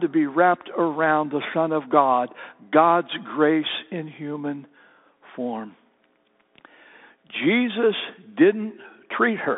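The speech runs through a Bluetooth CVSD headset codec for its whole length, coding one up-or-down bit per sample with an adapting step, which fits a 64 kbps link. The band stops near 3.8 kHz above a 200 Hz floor, so the audio sounds narrow and muffled, with scratchy s sounds, distortion on loud high sounds and a granular hiss.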